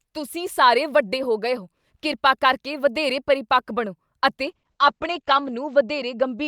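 At 4.44 s a call bitrate drop kicks in and runs to the end. The speech turns rough and watery, with the top end cut from 20 kHz to 8 kHz. That fits the encoder falling from about 64 kbps to 10 kbps, and it doesn't recover.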